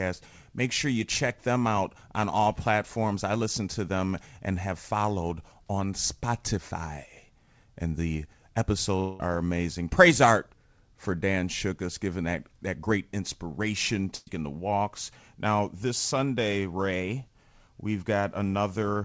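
From 9.00 to 9.22 s the sound gives way to a held, fading buzz or hiss lasting about 0.2 s, with no silence, and speech resumes further on with about 200 ms gone. That points to a likely long network dropout, though unlike a typical one this gap never falls to silence.

At 14.16 to 14.29 s, between "that that great inspiration" and "the walks", a burst of packet loss leaves about 120 ms missing. Roughly 110 ms is concealed as a decaying buzz or hiss and the last 10 ms drops to silence. It is shorter than the earlier gap, across a G.722 call path that carries nothing above 8 kHz.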